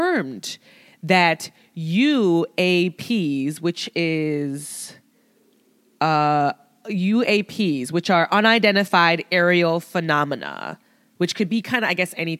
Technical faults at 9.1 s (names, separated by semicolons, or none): none